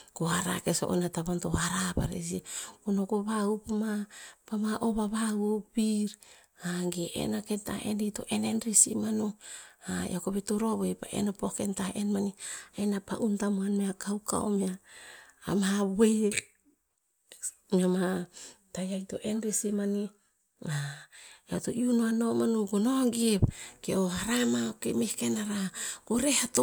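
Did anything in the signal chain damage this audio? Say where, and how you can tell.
No, no damage anywhere.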